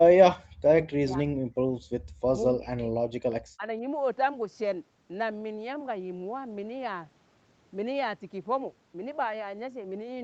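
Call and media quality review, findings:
Speech suppressed in double talk: level drops of around 40 dB at 0.00–0.16 s, 0.32–0.53 s, 0.86–1.62 s, 2.33–3.01 s and 3.54–3.84 s, plus a shallower dip of roughly 10 dB at 3.30–3.34 s. Each gap lasts about 40 to 500 ms. Likely component is the echo canceller. While far-end audio is playing, it cannot separate the near talker from loudspeaker echo and attenuates both.

Background gated by the echo canceller: room sound drops by about 33 dB between 1.90 and 2.05 s, for roughly 40 ms in total, then recovers. The canceller clamps microphone gain hard while the loudspeaker is active and releases it once playback stops. This one falls in a gap between the speech dips rather than overlapping one. The audio is band-limited at 8 kHz, consistent with a wideband Opus call path.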